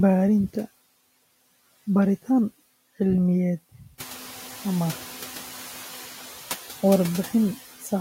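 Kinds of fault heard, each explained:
Noise suppressor artifacts: background noise drops about 8 dB in pauses and swells back under speech, so the spectrogram's noise floor dips and refills frame by frame.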